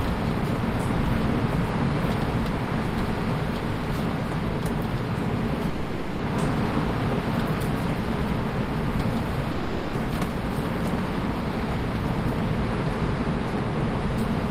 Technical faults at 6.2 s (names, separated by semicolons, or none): long network dropout